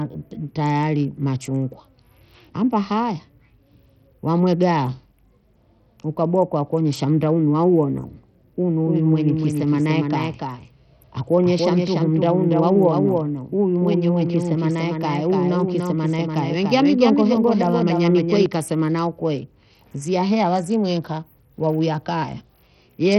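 A speech recording that most likely passed through a Bluetooth link using SBC compression at a low bit allocation, consistent with a rate around 64 kbps. The codec splits the signal into coarse sub-bands and starves the weak upper ones of bits, so nothing survives above 18.4 kHz. The treble that remains flickers in and out, and the heavily quantised bands leave a gritty, aliased roughness over the whole clip. From 8.86 s to 18.46 s there is also a doubled audio track, likely from a second copy of the same signal captured through a slower path and mixed back in. A full-band duplicate trails the original by about a third of a second at roughly 5 dB lower, with no reverb tail or room colour. It starts and stops abruptly at those two points.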